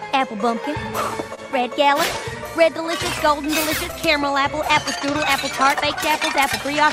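Clock drift between sender and receiver runs through the whole clip. The sender's clock is slow, by roughly 3 percent. Audio arrives a little slower than the receiver plays it out, so the jitter buffer keeps draining. The receiver cannot simply wait. It has to stretch the sound to stay in step, and that leaves small timing hiccups scattered across the clip at uneven intervals.

Repeated timing corrections follow from that drift. They run from 0.44 s to 6.87 s. The receiver repeats short pieces again and again, always in the same direction. The spacing between them is irregular. Together they add roughly a tenth of a second. Playback sits at about 99 percent speed. Each repeat is tiny. Any that come through are slight hiccups or a slightly unsteady tempo.

The first short stall from a late packet comes at 1.35 to 1.39 s. A packet missed its slot and the buffer ran dry. The receiver held the last sound for 26 ms until the packet arrived, then resumed from the same point. 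Nothing is lost. The delay grows by 26 ms from here on. A second stall follows at 5.63 to 5.67 s, with 15 ms filled. Each is a brief held sound with a slight buzz or dip.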